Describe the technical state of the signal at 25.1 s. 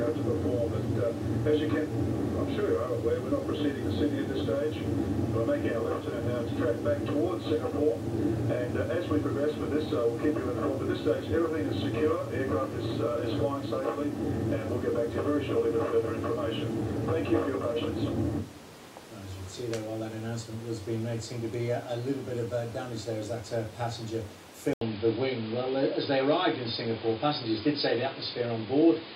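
At 25.1 s the sound sits inside a band-limited stretch running from 24.73 s to the end, heard after an 80 ms gap: nothing above 5 kHz, a faint new noise floor, level unchanged. This is likely an input switched to a poorer device. The gap and changed background set it apart from a simple low-pass filter.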